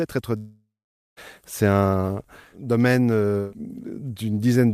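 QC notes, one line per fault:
0.37–1.19 s, long network dropout: incoming audio likely stopped arriving for about 0.8 s, leaving the receiver with nothing new to play. It stretched the last received speech into a buzzy tail that fades out, and roughly the final 0.49 s of the gap is bare silence. When the stream resumes at 1.19 s the speech continues further along, with about 0.8 s of it lost outright rather than delayed.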